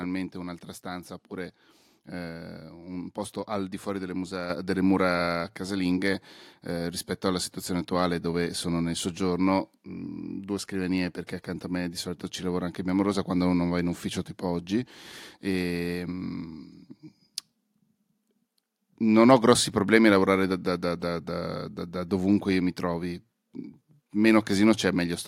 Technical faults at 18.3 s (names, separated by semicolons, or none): none